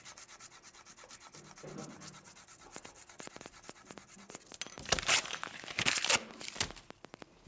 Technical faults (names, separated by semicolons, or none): train of clicks